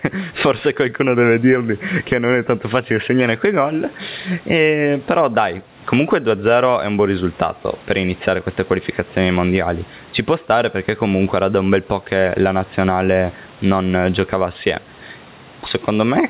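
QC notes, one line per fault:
Throughout: gain pumping. The speech level is repeatedly pulled down and released, swinging by around 15 dB, so loud and soft passages end up squashed together. The likely cause is input gain set far too high, with a fast limiter or compressor clamping each loud sound.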